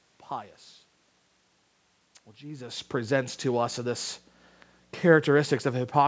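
Nothing in the signal points to a technical fault: the speech carries the normal high-pass shaping of a call microphone chain with no content above 8 kHz, the room's own background noise sits beneath it, and the level change around 2.5 s is simply the talker shifting position relative to the microphone.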